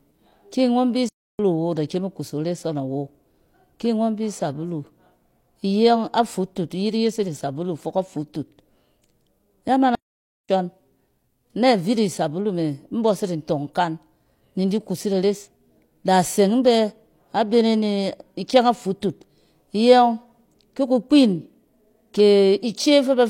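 A speech recording with two playback stalls, where the sound cuts to silence mid-flow: about 0.3 s from 1.09 to 1.39 s, and about 0.54 s from 9.95 to 10.49 s. The likely cause is the player running short of data or its thread being blocked.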